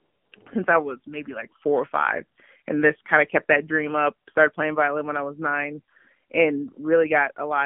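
Speech throughout carries the sound of the AMR narrowband mobile codec: nothing reaches above about 3.4 kHz or below 150 Hz, and the voice has a plainly audible buzzy, synthetic edge. That roughness comes from rebuilding the voice from a vocal-tract model fed by a few pulses per subframe, with the level of damage fitting AMR-NB at around 7.4 kbps. A simple telephone band-pass filter would narrow the band in the same way but leave the voice smooth rather than synthetic. From 0.00 to 0.32 s, before "since I was maybe", the opening is filled with AMR comfort noise. The phone judged the talker silent, stopped sending speech frames, and the receiver substituted smooth, steady generated noise for the real background, switching off as speech resumes. Ordinary line hiss or a noise gate would not behave this way: hiss would continue under the speech, and a gate would leave true silence rather than this featureless synthetic fill.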